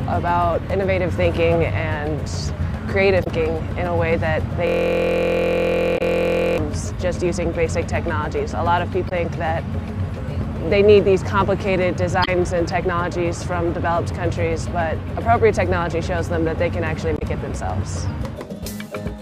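At 3.20 to 3.27 s there's a quick glitch from damaged data in the compressed stream. Corrupted bytes threw the decoder out of sync, so it hunted for the next frame header. Then from 4.67 to 6.58 s the system hang loop takes over. The computer or driver froze while the hardware kept replaying one 23.2 ms slice, which fits a 1024-sample buffer, about 90 times over. That gives a steady buzz at roughly 43 Hz. A second corrupted-data blip lands inside it at 5.94 to 6.01 s, and the same kind of damage comes back at 9.05 to 9.12, 12.21 to 12.28 and 17.15 to 17.22 s.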